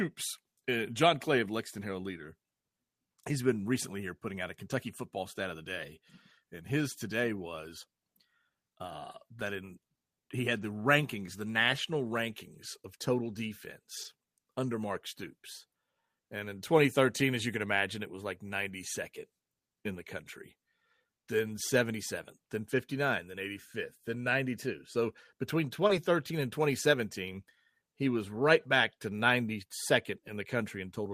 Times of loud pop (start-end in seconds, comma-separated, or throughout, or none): none